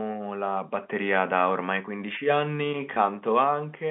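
At 2.94 to 2.96 s the speech stream suffers packet loss with pitch repetition. About 20 ms of audio never arrived, which fits a single lost packet, and the receiver filled the gap by repeating the last pitch period it had. Because the gap is so short, the concealed stretch never fades toward silence. It comes across as a brief, slightly held, buzzy sustain before normal speech resumes over the narrow G.711 telephone band.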